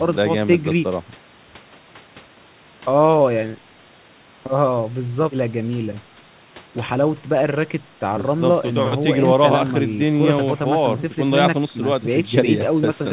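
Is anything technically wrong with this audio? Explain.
No, nothing technically wrong.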